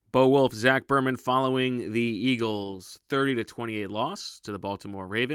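Speech, and from 1.55 s to 5.19 s there's a call bitrate drop. The encoder starts coding much more coarsely and trims the top end, so things get rough and a bit muffled, which fits a fall from about 64 kbps to roughly 27 kbps, bottoming out for about 1.8 s.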